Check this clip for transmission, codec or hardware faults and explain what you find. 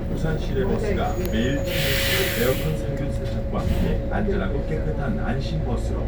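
Nothing stood out on listening to this audio.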